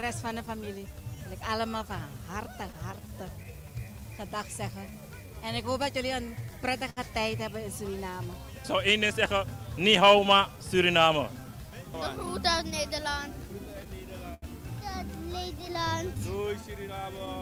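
From 0.01 to 0.69 s the first cluster of scattered short gaps appears, with a few holes of around 10 ms each. The receiver filled each by continuing the last sound. The result is brief ticks or smears, seen on a spectrogram as thin vertical seams where partials flatten briefly.

Starting at 0.29 s and running to 17.15 s, repeated timing corrections stretch the audio to about 97% speed, adding roughly half a second overall. Each small repeated piece is a faint hiccup or an unsteady tempo. On the waveform these are short duplicated cycles spaced unevenly, always lengthening.

Those corrections come from clock drift between sender and receiver across the whole clip. The sender's clock runs about 5 percent slow, so the jitter buffer keeps draining and the receiver pads it. The spectrogram shows a steady scatter of tiny stretched slices rather than one event.

More scattered short gaps follow from 2.48 to 3.47 s, again as a few brief patches, each near 10 ms.

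At 6.90 to 7.00 s a short stall from a late packet holds the sound for 67 ms while the buffer sits empty, then resumes without losing anything. It sounds like a held, slightly buzzy moment. A spectrogram shows horizontal smeared bands frozen in place, and the waveform shows a repeating flat-envelope segment.

Further scattered short gaps occur from 9.24 to 10.41 s (a few small ones) and from 12.58 to 14.45 s. That second stretch is the heaviest, with several patches and one lasting around 70 ms. The last cluster, 15.87 to 17.30 s, has several more tiny ticks.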